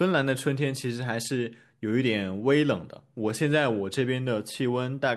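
No audible technical faults.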